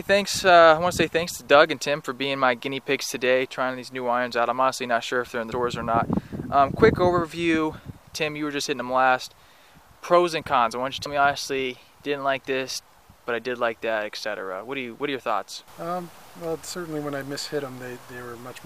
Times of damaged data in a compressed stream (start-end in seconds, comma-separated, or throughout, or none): 5.52